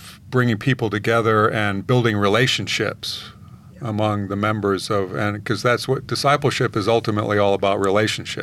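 No technical faults can be heard anywhere in the speech recording. There are no events to place on the timeline, so nothing needs to be marked.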